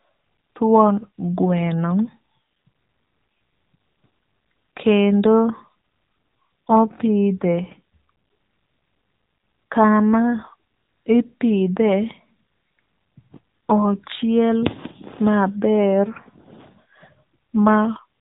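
From start to finish the speech runs through an AMR narrowband mobile codec, the classic 2G/3G phone path. Everything is squeezed into a band that stops around 3.8 kHz, so sibilants and air are gone and the voice sounds boxed-in. The damage is plainly audible: a buzzy, synthetic edge where the vocal-tract model and sparse pulse excitation can't quite rebuild the voice, which fits one of the lower AMR modes at roughly 8 kbps.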